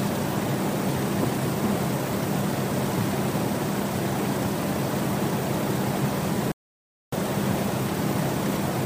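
At 6.52 s the input was likely lost, through a disconnected device, a failed link or a mute, while recording continued as silence. This audio dropout to silence cuts the sound off mid-flow until 7.12 s, leaving 0.61 s with no room tone.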